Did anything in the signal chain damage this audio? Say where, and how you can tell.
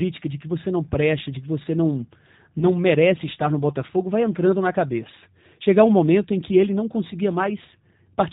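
Yes. G.729 codec damage runs through the whole speech clip: nothing above 4 kHz survives, and the voice sounds plainly rough and synthetic. That fits an 8 kbit/s G.729 coder rebuilding speech from a vocal tract filter, pitch predictor and sparse pulses.

VoIP packet loss concealed by the speech codec occurs at 2.59 to 2.67 s, between "de que você não" and "merece estar no". About 20 ms went missing, consistent with one lost packet. The decoder extrapolated its last pitch and filter with falling gain, leaving a brief, weakened stretch that recovers over the following frames.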